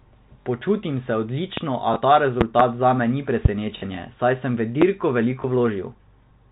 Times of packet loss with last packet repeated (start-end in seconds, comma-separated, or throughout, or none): 0.42-0.45, 1.94-1.96, 3.78-3.82, 5.42-5.44